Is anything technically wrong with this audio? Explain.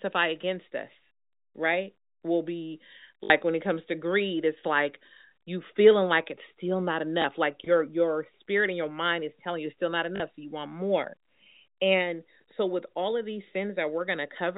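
Yes. There is packet loss with the last packet repeated: the receiver lost stretches of the stream and filled each gap by replaying the packet before it. This happens at 3.24 to 3.30 s, just before "when it comes to"; at 7.22 s, after "like it's still not"; and at 10.16 to 10.20 s, after "you it's still not". The gaps last 60, 20 and 40 ms, which fits one to three 20 ms packets. The longer runs buzz at about 50 Hz, a brief robotic stutter over the telephone-band G.711 sound.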